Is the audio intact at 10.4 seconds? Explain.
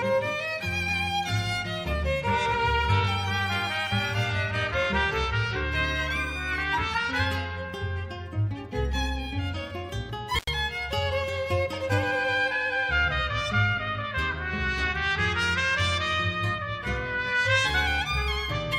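No. From 10.37 to 10.49 s the sound drops out for about 86 ms, with crackle at the edges of the gap and faint hiss in between. This is an intermittent contact: a loose cable or plug briefly breaks the signal path.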